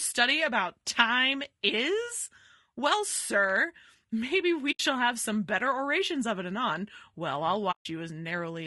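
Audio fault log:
throughout: low-delay AAC compression. The speech is rough and grainy the whole way, with a hiss filling the gaps between the harmonics and a top band that sounds thin and a bit synthetic. That's the signature of a low-delay AAC codec, likely AAC-ELD, squeezed to a low rate, which fits something around 32 kbps. Its very short frames can't pin down the pitch harmonics cleanly, so the bits run out and the detail smears into noise.
4.71 to 4.80 s and 7.71 to 7.86 s: AAC frame loss with muting. The first hole lands between "sir maybe" and "have some better orations", with about 80 ms of audio gone. The second is longer, around 140 ms. In both the sound dips softly to silence and comes back, because the decoder zeroed the missing frames and the overlapping windows fade the edges out and back in.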